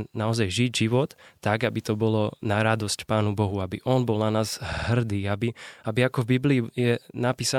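Repeated frames stutter this speech clip at 4.72 to 4.87 s. A 52.2 ms block, which fits a run of two compressed frames written out more than once, is played three extra times in a row, so the decoder repeats it and the audio runs 156.7 ms longer.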